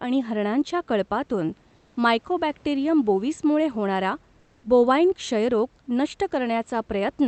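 From 1.75 to 1.95 s, comfort noise in place of the background, likely from discontinuous transmission: featureless hiss about 1 dB quieter, uniform on a spectrogram.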